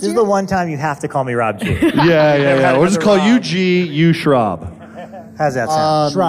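Across the whole clip the channels drift apart. The two sides run on separate clocks, out by roughly 70 ppm. Their offset slides steadily, reaching a fraction of a millisecond by the end. Summed to mono, comb notches sweep slowly, heard as slow flanging.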